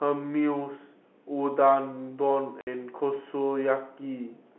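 At 2.61 s the speech drops out completely for 60 ms, until 2.67 s. This is packet loss filled with silence. Audio travels in small packets, and here the receiver never got a run of them. It played nothing in their place. The gap length fits two lost 30 ms packets. The cut starts and ends abruptly. The surrounding speech carries the narrow, telephone-band tone of G.711 coding.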